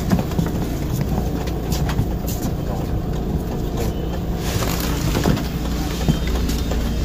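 At 1.07 to 1.12 s, 3.63 to 3.67 s and 5.21 to 5.26 s, damaged data in the compressed stream makes the decoder misread frames and lose sync, giving roughly 50 ms glitches. Each shows as an abrupt waveform discontinuity.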